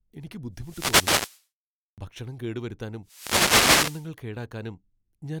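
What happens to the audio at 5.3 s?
At 5.3 s the speech carries on intact, with no dropout, click or distortion at that point.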